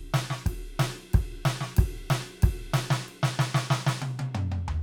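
The music carries no audible technical faults at any point, with the signal holding steady and continuous throughout.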